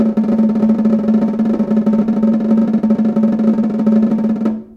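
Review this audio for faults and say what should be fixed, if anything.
Reviewing this music recording turns up no faults, so nothing needs to be fixed.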